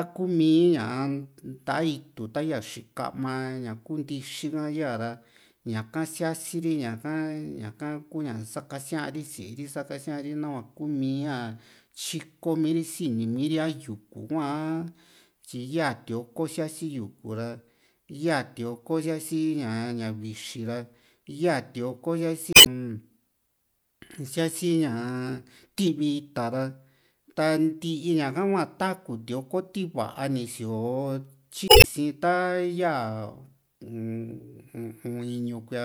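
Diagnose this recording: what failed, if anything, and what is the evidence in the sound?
Damaged data in a compressed stream, at the codec stage: at 22.50–22.67 s and 31.66–31.85 s the speech breaks into a brief glitch as the decoder misreads corrupt frames and hunts for the next header.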